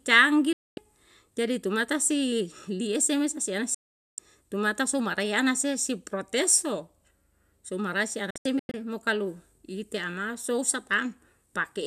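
Speech with digital broadcast dropouts: the receiver mutes abruptly at 0.53–0.78 s and 3.74–4.19 s, then in short scattered holes around 8.30–8.74 s, losing what was sent meanwhile.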